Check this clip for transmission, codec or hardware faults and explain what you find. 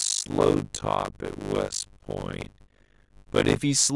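The clip has one fault, a block size mismatch with zero padding. It runs from 0.00 to 3.57 s. One stage writes short blocks, which fits a 256-sample write, into a larger read block. Zeros fill each remainder. The result is a 50 Hz buzz and speech at 0.533 times normal speed, with its timbre intact.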